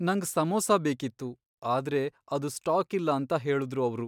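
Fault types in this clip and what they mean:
No fault types are present in this clip.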